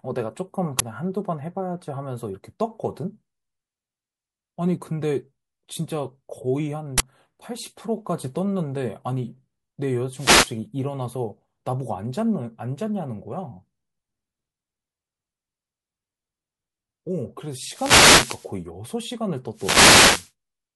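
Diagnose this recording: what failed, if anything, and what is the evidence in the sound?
Harsh bursts of digital noise at 0.79 s and 6.98–7.00 s are an uninitialised buffer: unwritten memory was played out, fitting 512- and 1024-sample blocks.

Swishes of static over the speech at 10.14–10.57 s, 17.62–18.54 s and 19.53–20.31 s are wireless microphone noise hits, where FM signal fades let receiver noise rise.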